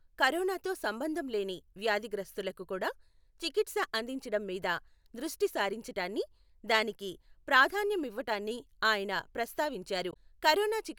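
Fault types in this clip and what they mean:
Damaged data in a compressed stream: a brief disruption of about 70 ms near the end, at 10.10 to 10.16 s, where corrupted bytes in the encoded speech make the decoder misread those frames, lose sync and hunt for the next valid frame header.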